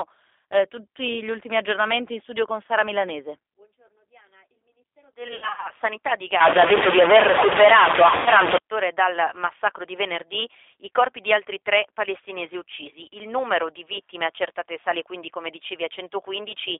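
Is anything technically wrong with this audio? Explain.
Yes. The whole clip carries G.729 codec damage, and there are two bursts of VoIP packet loss concealed by the speech codec.

Throughout, the speech passes through G.729 at 8 kbit/s. The codec rebuilds each frame from a vocal tract filter, a pitch predictor and a few pulses, so the speech sounds rough and synthetic. The line band is limited to 300 Hz to 3.6 kHz, so a spectrogram shows nothing above about 3.6 kHz and an empty strip below 300 Hz.

From 5.28 to 5.68 s, about 200 ms of audio is lost, scattered over 360 ms, with the longest gap 60 ms. From 8.16 to 8.30 s, about 100 ms is lost, just before "ore dal massacro di". Each time the decoder extends the last pitch and filter at falling gain, so the speech turns into a buzzy tone or coloured noise that fades, then stays weak briefly after packets return. On a spectrogram the harmonics smear into flat, repeated horizontal stripes, and the waveform shows a decaying envelope.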